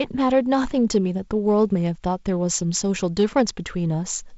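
No technical faults can be heard in the speech. The G.722 wideband telephone coding at 48 kbit/s adds only light coding noise, and the band stops at 7.7 kHz.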